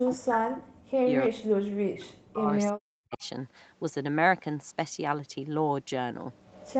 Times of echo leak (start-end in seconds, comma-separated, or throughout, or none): 0.06-0.12, 1.22-1.28, 3.12-3.27, 6.45-6.73